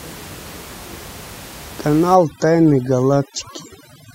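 From 2.15 s to the end, overdone noise removal sets in. The suppressor drives bands near its noise estimate almost to zero, taking quiet speech detail with them. The room noise, about 20 dB below speech before this point, collapses into twinkling specks. A spectrogram shows scattered isolated dots where the background was.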